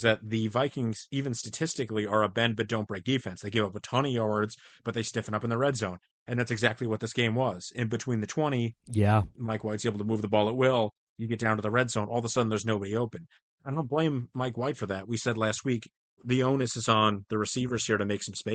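Nothing in this speech recording stood out as a technical problem on listening.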